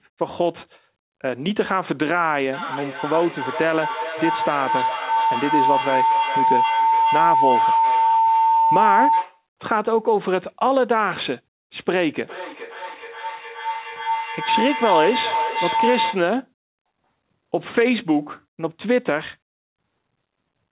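From 2.53 to 9.47 s and again from 12.25 to 16.33 s, feedback howl builds as sound loops between microphone and loudspeaker, gaining on each trip. A tone near 1 kHz swells, pulsing roughly every 0.4 s, peaking about 1 dB above the speech, then about 1 dB below. A spectrogram shows a bright horizontal line near 1 kHz, and the waveform shows a swelling, throbbing envelope.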